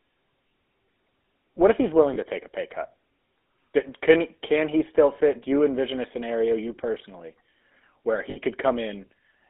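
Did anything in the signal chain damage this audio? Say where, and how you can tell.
Yes. The codec stage damaged it throughout. The speech has the buzzy, gravelly roughness of the GSM full-rate codec, and it is plainly audible. Only about 250 Hz to 3.6 kHz survives. The excitation is rebuilt from sparse, regular pulses, which fits a 13 kbps stream.

The network stage also dropped data, heard as lost GSM frames. At 2.14 to 2.17 s there is a 20 ms rough, metallic ring. At 8.30 to 8.37 s a longer 60 ms ring follows. The decoder repeated the last good frame's settings, which fits one lost frame, then three.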